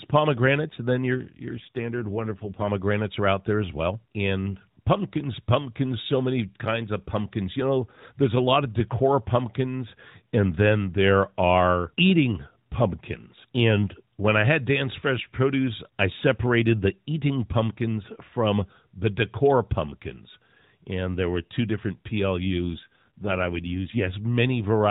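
At 1.14 s, just after "pomegranates and then", the speech turns rougher and more synthetic until 2.69 s, recovering before "are out there as". The same happens from 22.46 s to 24.16 s after "there were two different". These are AMR rate drops. The bandwidth and continuity hold, but the coarser excitation coding buzzes the voice, which fits the narrowband codec stepping down from 12.2 kbps to 5.9 kbps.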